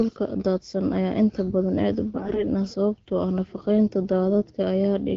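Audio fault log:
2.14 to 2.43 s, AMR bit errors: for about 0.3 s the speech goes hoarse and gargly but keeps its pitch and level. Flipped bits, around 5 percent, scramble the excitation pulses and the fine pitch, gain and spectral values in the wideband stream.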